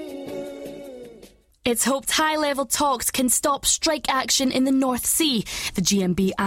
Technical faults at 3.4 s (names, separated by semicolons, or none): none